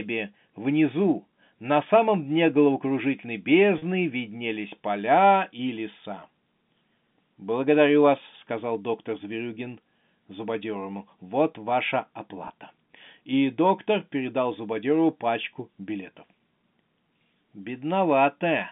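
Around 3.78 to 3.82 s, just before "виднелись поля и леса", there's packet loss with pitch repetition: roughly 40 ms went missing, which fits two packets, and the receiver looped the last pitch period, so you get a brief buzzy hold. A shorter 20 ms one, about a single packet's worth, does the same at 12.48 to 12.50 s, over the narrow telephone band.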